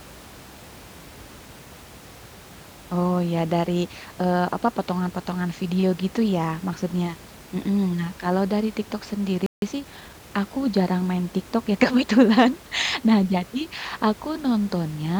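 At 9.46 s the speech just cuts out for about 160 ms, a playback stall, with silence until 9.62 s. That gap most likely comes from the player running dry or its output thread getting blocked, so nothing reached the output until it recovered. The room noise, sitting about 22 dB under the speech, drops out along with everything else.

Right after, from 9.62 to 10.24 s, you get time-compressed catch-up: the player trims its backlog by snipping out small slices and cross-fading the joins, running at about 1.25 times speed. It sounds rushed but keeps its normal pitch, hurrying through "aku jarang main".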